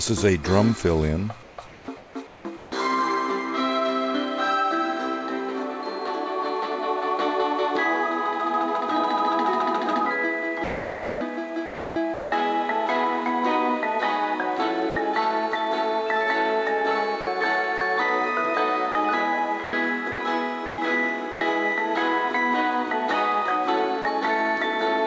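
From 1.43 to 2.72 s the real background gives way, for 870 ms in total, to a smoother, synthetic-sounding noise of a different character. This is comfort noise in place of the background. The sender likely stopped transmitting during the pause and sent only occasional noise descriptions, and the receiver filled the gap with generated noise shaped to approximate what was there.

Between 10.64 and 12.32 s the sound drops out in more than one place, 1.05 s of it in all, with synthetic fill in the holes. This is sound chopped by the voice detector: the sender's detector likely toggled between sending and not sending, cutting quieter parts and swapping them for comfort noise.

At 14.90 s there is a 60 ms gap where the sound gives way to steady noise before returning. This is sound dropped by the voice detector: the detector likely mistook a quiet moment for background and paused transmission until it triggered again.

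The chopping returns from 17.21 to 17.81 s, with 90 ms replaced, and from 18.92 to 21.41 s, with 390 ms replaced. Across both stretches there are repeated short holes.

At 24.02 s a second dropout replaces 30 ms with noise. It likely has the same mechanism as the one at 14.90 s.

Throughout, nothing is heard above 8 kHz, which fits a wideband call codec such as G.722 at about 64 kbps.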